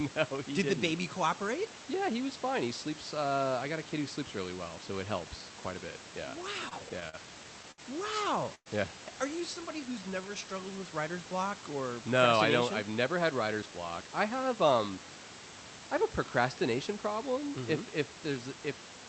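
From 6.69 to 7.80 s there are repeated stalls (stutter): six brief gaps, the longest 66 ms, where the receiver ran out of packets and stretched the last sound to fill about 158 ms, roughly 14% of that stretch. Unlike a single freeze, the sound keeps catching and restarting, dragging without losing content.

At 8.55 s a call audio freeze holds for about 0.11 s. The preceding sound is extended as a fading buzz or hiss that ends in 50 ms of silence before the audio resumes where it stopped. The likely cause is packets held up in transit, and the playback delay grows by 112 ms. It is one clean hold rather than a string of catches.

From 9.54 to 10.53 s, just before "with writer's block or", a jitter buffer slow-down repeats single pitch periods or bits of pauses to rebuild the reserve, adding 109 ms. The audio runs at 90% speed with unchanged pitch and drawn-out sounds. There are no gaps, which separates it from a stall.

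From 12.38 to 15.05 s a jitter buffer speed-up trims short pitch-period pieces, around a fifth of a second in total, so the audio runs at 107% speed at the same pitch and sounds slightly hurried. It is the mirror of the earlier slow-down. The Opus call path limits the top end at 8 kHz, and room noise sits about 13 dB below the speech.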